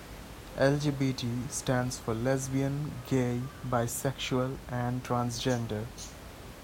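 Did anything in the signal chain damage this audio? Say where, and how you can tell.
No, nothing in the signal chain damaged this audio.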